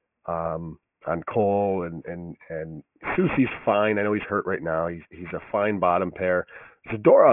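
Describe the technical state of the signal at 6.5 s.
At 6.5 s the speech sounds gritty and metallic, with sibilants smeared into harsh, unrelated tones and the top of the spectrum packed right up against a hard edge at 3 kHz. This is aliasing, present throughout the clip. Energy above 3 kHz was not filtered out before the rate was lowered, which fits a drop to about 6 kHz, so it folds back below that edge as false frequencies, roughly 15 dB under the speech.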